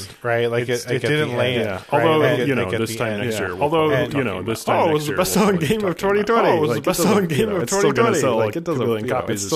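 Throughout the speech a doubled audio track is heard: a second, full-band copy trails the original by about one and a half seconds at roughly equal loudness, likely from a slower duplicate capture path. Unlike an echo or reverb, it repeats once, with no decay or room colour.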